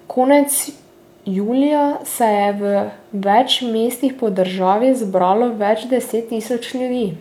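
Nothing in this speech recording points to a technical fault; the signal holds steady without any audible break, distortion or level problem.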